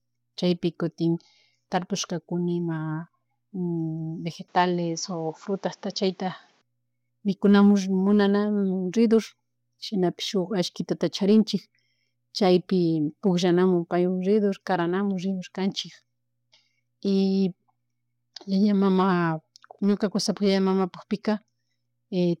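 Input switched to a poorer device, from 4.48 to 6.62 s: the speech suddenly loses everything above 7.6 kHz and turns duller, then regains its full brightness when the span ends. The change is seamless, with no gap at either edge and no real jump in level, but a faint new noise floor, roughly 40 dB under the speech, comes in with the duller sound. The likely cause is the recording briefly drawing on a different, narrower-band microphone.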